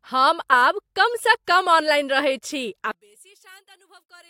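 One channel inverted is the likely cause of the fault from 2.91 s to 4.30 s: one side of the stereo pair has its polarity flipped, so when the two channels are summed to mono, the speech common to both cancels itself out. The sound then falls by about 30 dB. What remains is only the small difference between the channels, a faint residue of the speech that lasts to the end of the clip.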